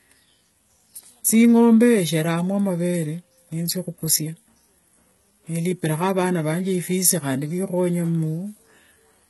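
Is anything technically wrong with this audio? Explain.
Yes. Throughout the speech there is heavy HE-AAC compression damage, likely from a low-bitrate encode that fits about 16 kbps. The treble above the core band is spectral band replication, rebuilt from copied lower bands, so s sounds turn gritty and lispy, and nothing remains above 11.8 kHz.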